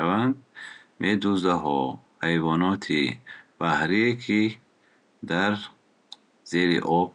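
No technical faults are audible.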